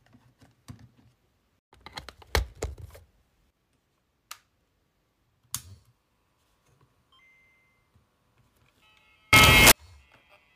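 Samples built from the wrong bytes, from 9.33 to 9.72 s: the reader assembles each sample from mismatched bytes, so the rapidly changing low-order bits land in the most significant position. For about 0.39 s the sound collapses into loud, harsh broadband noise.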